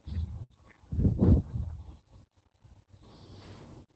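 A burst of packet loss runs from 0.43 to 0.52 s. Several packets in a row never arrived, so the receiver stretched the last sound for about 64 ms and faded it, giving a held buzz or fading hiss, then resumed with roughly 60 ms of speech skipped.

A lost packet rebuilt from error correction follows at 0.52 to 0.54 s. That single 20 ms packet was lost, but the next one carried a low-bitrate copy, which the Opus decoder played instead. There is no gap, only a brief rougher, noisier patch.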